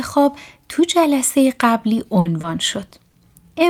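At 2.19 to 2.27 s a burst of packet loss leaves about 60 ms that the receiver fills by extending and fading the last sound, then skips 60 ms ahead. It's heard as a brief held buzz or fading hiss. A spectrogram shows a frozen, dimming sound before an abrupt jump.

Short concealed packet losses follow at 2.41 to 2.45 s, 2.89 to 2.93 s (about 20 ms each) and 3.09 to 3.15 s (about 40 ms). Each is a brief smear or wobble, visible as a small smoothed patch with blurred detail in the waveform.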